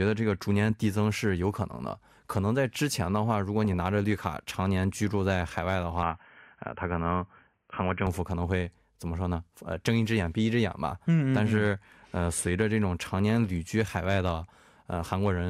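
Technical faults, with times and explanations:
3.64–3.79 s, DAB burbling: residual bit errors slip past error correction and corrupt MP2 sub-band samples and scale factors, giving a brief burst of noise blips in single sub-bands over the speech.
6.03–8.07 s, input switched to a poorer device: the recording likely switched inputs. The speech goes dull and boxy with nothing above 3.2 kHz and a faint new noise floor, with no gap and no level jump.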